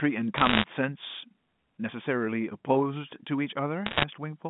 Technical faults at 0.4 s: bit errors on a digital phone line

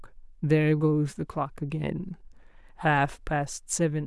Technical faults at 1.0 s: none

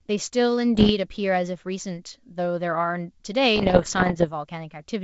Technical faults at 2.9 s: none

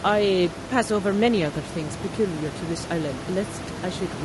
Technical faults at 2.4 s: low-delay AAC compression

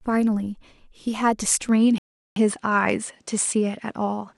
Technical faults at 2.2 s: input switched to a poorer device; rebuffering stall

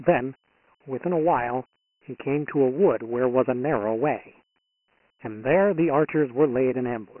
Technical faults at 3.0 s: Dialogic VOX ADPCM

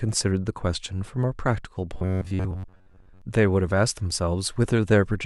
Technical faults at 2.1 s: robotic sound from repeated short buffers

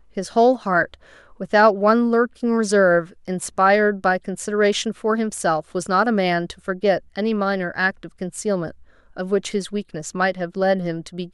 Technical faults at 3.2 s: none

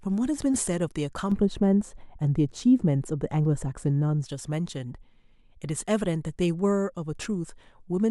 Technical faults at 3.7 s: de-emphasis applied wrongly

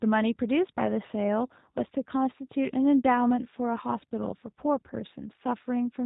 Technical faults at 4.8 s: G.729 codec

